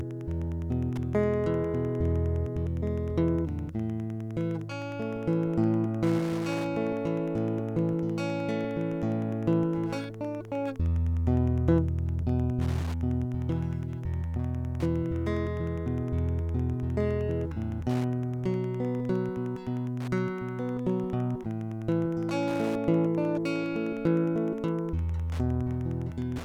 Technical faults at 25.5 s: Wi-Fi interference

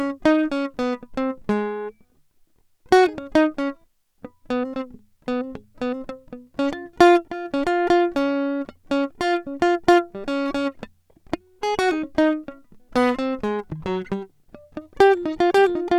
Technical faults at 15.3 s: none

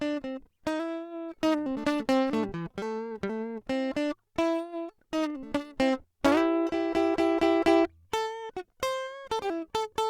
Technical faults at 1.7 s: none

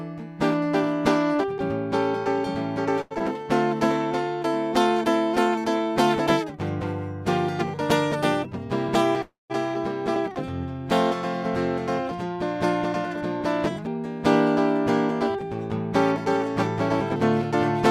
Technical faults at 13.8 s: jitter buffer speed-up

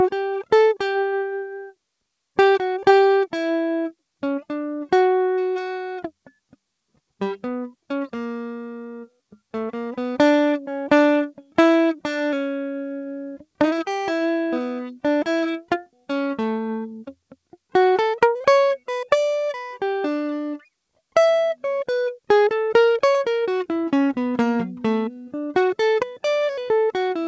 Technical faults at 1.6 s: sound cut by the noise suppressor

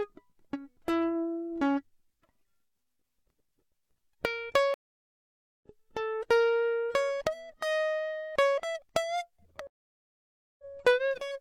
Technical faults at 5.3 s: stream reconnect

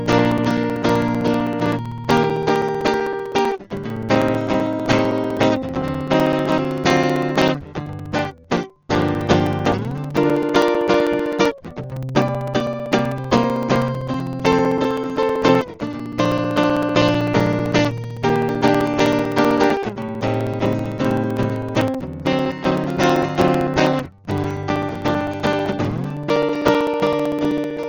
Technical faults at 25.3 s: Dolby Digital compression; periodic USB or driver dropouts

